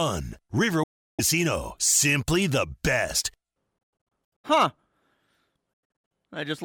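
Speech packets likely missed their delivery deadline to the headphones, a Bluetooth dropout that cuts the sound to silence. It happens at 0.83 to 1.21 s, right before "simply the best"; at 3.78 to 4.45 s, just after "simply the best", as 348 ms of scattered gaps (longest 93 ms); and at 5.73 to 6.11 s, as 279 ms of gaps. Each time, playback resumes as though it had continued.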